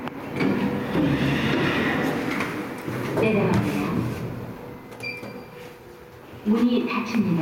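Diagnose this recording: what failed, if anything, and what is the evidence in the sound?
Gain pumping runs through the whole recording: the level swings by around 5 dB, squashing the dynamics. The likely cause is input gain set far too high, with a fast limiter pulling it back. Unlike noise suppression, which gates the background down in the gaps, pumping tends to let it rise.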